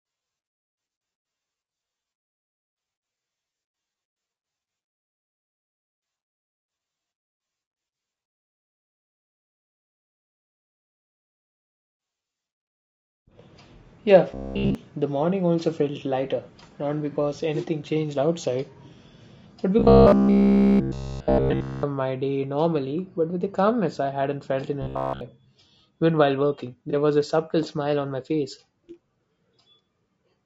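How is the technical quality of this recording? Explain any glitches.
The recording is clearly degraded. Coding damage runs through the whole file, with two further kinds of glitch from about 14 seconds on.

Low-delay AAC compression affects all 30 seconds. The speech sounds rough and grainy, with a noisy haze between the harmonics and a thin, somewhat synthetic top end. This plainly audible damage is most likely from AAC-ELD, the low-delay codec used for video calls, running at a bitrate around 32 kbps. Its short frames resolve pitch harmonics poorly, so at that rate the voice cannot be coded cleanly.

Robotic sound from repeated short buffers occurs at 14.31–14.75 s, at 19.79–21.83 s, and at 24.82–25.21 s just after "I hadn't felt in". In each stretch the voice becomes a rigid, metallic buzz at 66.7 Hz, and essentially all of the audio is replaced by repeats. The likely cause is playback starved of new data and looping the last 15 ms buffer while the real audio is skipped. 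That loop length sets the fixed buzz pitch.

AAC frame loss with concealment shows up as three brief smeared, noisy patches. The first is at 17.12 s, between "also felt lighter not" and "anything changed outside". The second is at 19.40 s, and the third is at 26.90 s, between "while working" and "was a subtle smile". Each gap lasts about 30 ms, which fits a single lost frame. The decoder filled each gap by extrapolating from the last good spectrum, which is why these spots sound blurred rather than silent.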